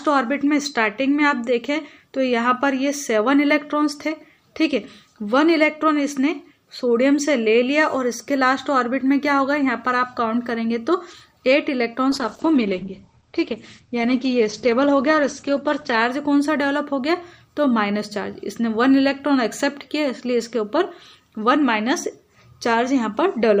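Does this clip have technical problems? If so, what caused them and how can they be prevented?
Yes. A call bitrate drop runs from 12.15 to 16.05 s. The encoder's bit budget collapsed for about 3.8 s, which fits a fall from roughly 128 kbps to about 11 kbps. The audio turns coarse and watery, and its bandwidth narrows from 20 kHz to 8 kHz, so it sounds muffled. Keeping a steadier network path, or setting a higher minimum encoder bitrate, would prevent it.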